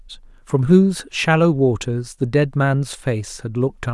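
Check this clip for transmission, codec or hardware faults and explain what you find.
No faults turn up anywhere in this clip.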